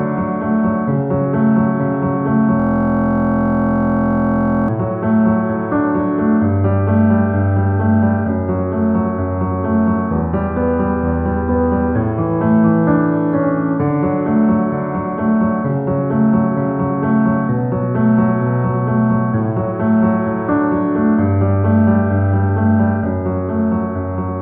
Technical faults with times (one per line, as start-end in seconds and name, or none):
2.60-4.68 system hang loop